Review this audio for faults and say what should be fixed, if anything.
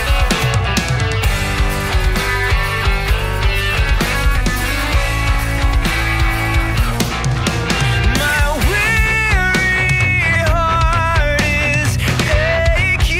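Nothing here needs fixing, as no faults turn up anywhere in the recording.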